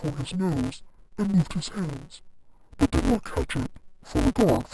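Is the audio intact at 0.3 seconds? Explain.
No. Throughout the clip, interleaved audio is being read as planar: each block of about 5.33 ms, which fits 128-sample blocks, is split into halves treated as separate channels. At 0.3 s the speech sounds dull and robotic, buzzing at 188 Hz without a clear octave drop.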